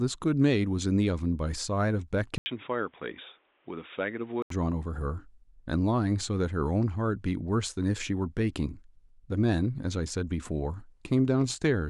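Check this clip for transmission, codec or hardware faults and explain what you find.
One fault stands out. From 2.38 to 4.50 s the speech goes dull and boxy after a brief 80 ms gap. Nothing reaches above 3.8 kHz, the level drops a few decibels, and a faint new background noise appears. The likely cause is an input switched to a poorer device, whose narrower band and own noise take over until the original input returns.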